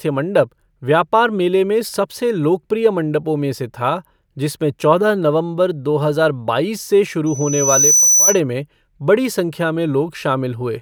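A microphone is picking up the loudspeaker it feeds, and around 6 kHz the loop gain climbs past one, producing loudspeaker feedback squeal in this speech clip from 7.26 to 8.40 s, right after "दो हजार बाईस से". A thin, piercing tone swells over roughly three-quarters of a second until it sits a few decibels above the speech, then cuts off before "में बड़ी संख्या".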